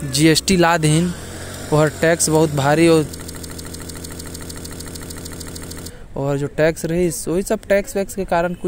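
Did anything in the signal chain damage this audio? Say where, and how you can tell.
Yes: from 3.22 to 5.90 s a 150 ms slice of speech repeats back to back, a broken-record loop, likely a playback or stream buffer stalling and resending its last fragment.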